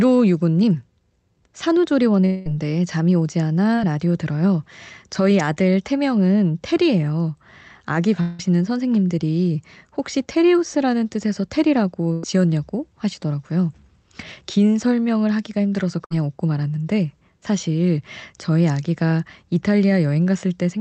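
At 2.25 to 2.47 s the speech gives way to a buzzy or hissy continuation of the last sound that fades over about 200 ms, and the speech resumes with that stretch simply gone. No dead silence is left. This is a long network dropout: the likely cause is that audio stopped arriving altogether, and the receiver extrapolated from what it last had until real packets came back. The same thing recurs at 8.21 to 8.41 s, this time with about 180 ms of speech replaced by the fading fill.

Between 3.76 and 3.79 s there is a brief wobble, a tiny smear lasting barely more than a hundredth of a second. It is short concealed packet loss. About 20 ms of the call reached the decoder too late, and the receiver covered the hole by extending the preceding sound before blending back into the real signal.

At 12.13 to 12.25 s the sound turns into a held, decaying tail for about 100 ms before the speech picks up further along, and at 16.05 to 16.12 s a shorter version of the same effect lasts about 60 ms. 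Both are bursts of packet loss. Several consecutive packets never arrived in time, so the receiver stretched the last sound and turned it down while it waited, and the material in between is lost. Throughout, the audio carries the dulled top end of a call codec, consistent with an 8 kHz bandwidth limit.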